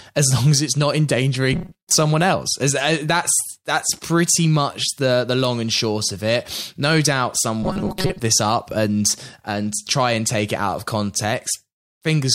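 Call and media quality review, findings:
Rigid metallic buzz near 188 Hz at 1.53–1.91 s and 7.63–8.20 s. Robotic sound from repeated short buffers, likely starved playback looping a roughly 5 ms chunk over about half the audio in each span.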